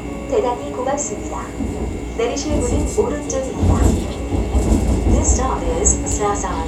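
No technical faults can be heard anywhere in these sounds.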